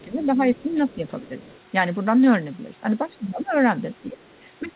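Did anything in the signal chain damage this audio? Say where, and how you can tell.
Yes. The other side's voice leaking through sits faintly under the talker, around 30 dB down, from 0.0 to 1.6 s and again from 4.22 to 4.71 s. A spectrogram shows a second, weaker set of speech harmonics, likely residual echo the call processing's echo canceller missed.

Speech suppressed in double talk appears between 0.02 and 1.31 s, with dips of about 15 dB totalling roughly 0.4 s, and from 3.1 s to the end, dipping about 10 dB. The waveform envelope shows sudden notches, likely the canceller ducking both voices during overlap.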